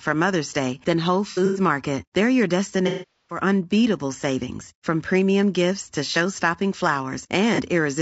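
Throughout, the speech sounds rough and grainy with noise between harmonics, plainly audible low-delay AAC compression, likely AAC-ELD at a rate fitting about 32 kbps. AAC frame loss with concealment then fills gaps from the last good spectrum. At 1.31–1.60 s, scattered 150 ms losses, the longest run about a tenth of a second, sound smeared and noisy. At 2.87–3.40 s, a 420 ms gap before "unbeatable savings from premium" decays and fades back in. At 7.55–7.60 s, a 30 ms loss leaves a brief phasey blip.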